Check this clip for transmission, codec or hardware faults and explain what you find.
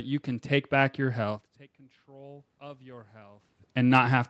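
One fault is present: automatic gain rising. From 1.76 to 3.53 s, after the input falls by about 24 dB as the talker moves back, the gain control gradually adds about 6 dB, so the speech and room noise swell together.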